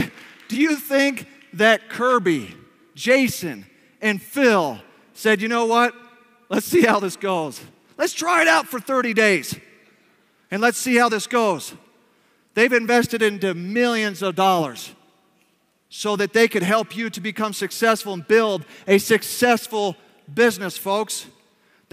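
No technical faults can be heard anywhere in this clip.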